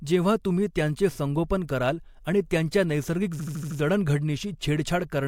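At 3.39 s, right after "कराल आणि त्यांच्या नैसर्गिक", repeated frames make the speech stutter until 3.78 s. A 78.4 ms block, which fits about three compressed frames, plays five extra times. Unlike a dropout, nothing is lost; the speech instead stretches by 391.8 ms.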